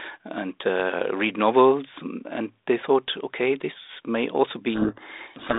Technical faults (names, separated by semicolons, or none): codec payload misread